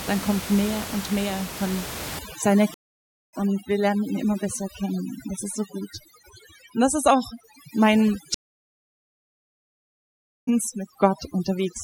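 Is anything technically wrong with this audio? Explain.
Yes, there are two kinds of fault: overdone noise removal and two stream reconnects.

From 2.19 s, right after "mehr und mehr von", to the end at 11.83 s, a noise reduction stage is working far too aggressively. Any frequency band that comes close to its noise estimate gets pulled down hard or switched off, and quieter parts of the speech are cut along with the noise. The room noise, which sits about 12 dB below the speech, is reduced and breaks up into twinkling, warbling specks.

Stream reconnects occur at 2.74 to 3.33 s and 8.34 to 10.49 s. Each time, the connection dropped and the player fell silent, about 0.59 s the first time and 2.13 s the second. It then reconnected and started a new decoder partway through the stream. When the sound returns, it has skipped ahead, by roughly 0.7 s the first time and roughly a second the second time, so that stretch is missing. 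The restart fades in rather than resuming at full level.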